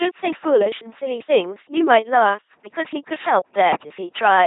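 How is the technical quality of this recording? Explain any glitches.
Poor. The speech has been through heavy vocoding. Throughout, the LPC-10 vocoder rebuilds speech from buzz or hiss through a ten-pole filter. The result is mechanical and robotic, which fits 2.4 kbit/s, with nothing above 3.8 kHz. Unlike codec warble, it has a steady buzz and no smeared detail.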